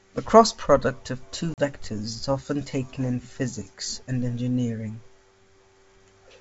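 Packet loss on an ADPCM call occurs at 1.54 to 1.59 s, right after "cross product of two". About 40 ms of speech drops out and is replaced by silence, with hard edges on both sides. That gap fits a couple of lost packets. Because G.722 codes each band as differences from a running prediction, the receiver's predictor and step size lose track of the sender's across the gap, so the speech resumes briefly mismatched before settling.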